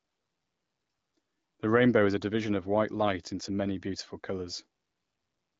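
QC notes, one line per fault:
No faults heard anywhere in this speech recording.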